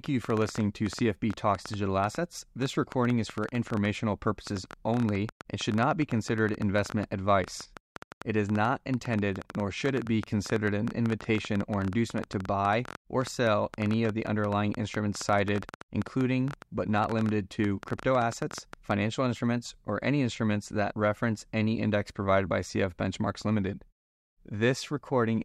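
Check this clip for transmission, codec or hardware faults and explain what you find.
There is one fault in the speech: a train of clicks. From 0.06 s to 18.92 s, just before "instruments or any instruments", a sharp ticking runs over the talking and through the pauses. The clicks come at about 9.7 per second on an uneven pace, roughly two hundred of them, with peaks standing well above the speech, around 10 dB. The repeated pulses, all much alike in shape, likely come from interference from nearby equipment or a faulty connection or power supply.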